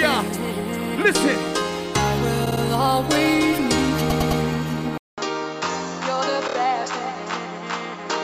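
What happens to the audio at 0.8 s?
Nothing goes wrong at 0.8 s, where the audio plays through cleanly with no fault to be heard.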